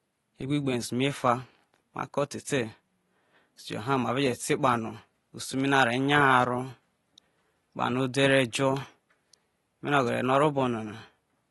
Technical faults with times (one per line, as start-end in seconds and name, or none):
0.00-11.50 AAC compression